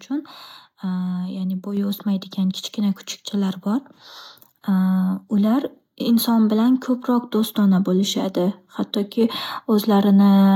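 A speech recording with a microphone volume step-up at 1.77 s: the call software judged the input too quiet and raised the device gain by about 4 dB at once, lifting voice and background noise together. The waveform envelope jumps abruptly there, and the spectrogram brightens evenly across all frequencies from that instant.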